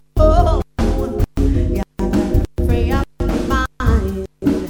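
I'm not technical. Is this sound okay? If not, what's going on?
Yes, listening through it, nothing stood out as a problem.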